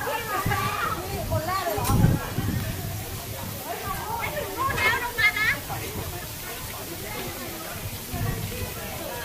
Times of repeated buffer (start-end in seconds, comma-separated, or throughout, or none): none